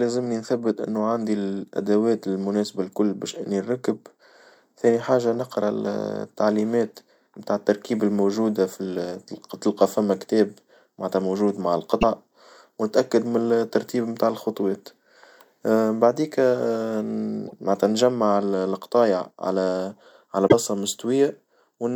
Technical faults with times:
11.98-12.03 damaged data in a compressed stream
17.44-17.53 damaged data in a compressed stream
20.44-20.54 damaged data in a compressed stream

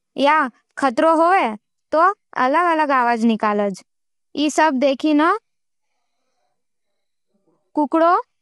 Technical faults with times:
0.00-8.42 low-delay AAC compression

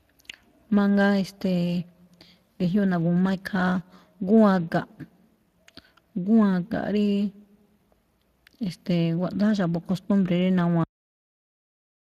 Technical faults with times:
0.00-12.19 Speex codec
10.84-12.19 cut-off end

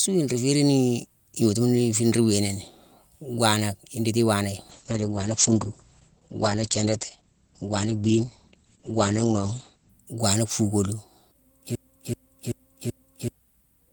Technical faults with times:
4.70-9.97 call bitrate drop
11.75-13.33 broken-record loop

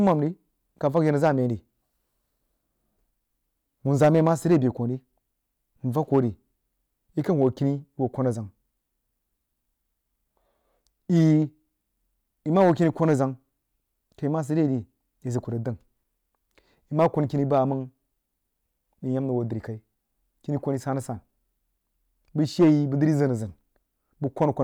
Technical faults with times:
0.00-24.63 hard clipping

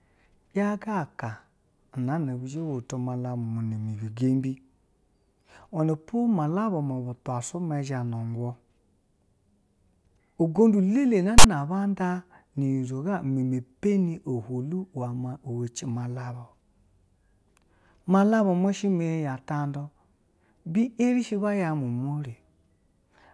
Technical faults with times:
11.38-11.44 file tags played as audio

